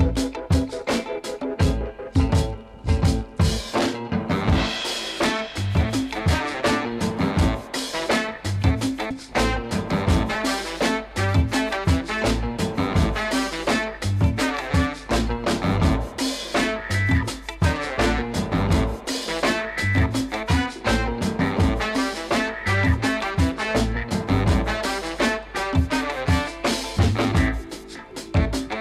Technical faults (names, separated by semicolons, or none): compressed frames skipped